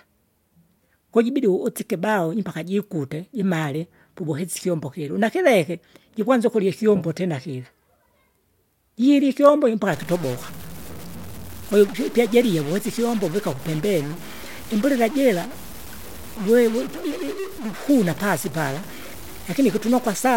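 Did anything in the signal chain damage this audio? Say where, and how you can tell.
Yes: from 9.93 s to the end, a stuck bit, likely a faulty converter line, adds harsh buzz and fills pauses with noise about -30 dBFS.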